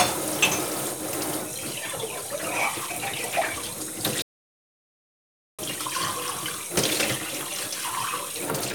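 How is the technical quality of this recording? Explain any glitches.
The recording has one clear glitch, a playback stall. From 4.22 s to 5.59 s the sound stops in mid-flow and the output is silent for about 1.36 s before the sound picks up again. The likely cause is that the player ran short of data or had its processing thread blocked, so it had nothing to send out until it recovered. This is far longer than a momentary dropout, which lasts only milliseconds. The sound also cuts to silence abruptly rather than tailing off the way a natural pause would.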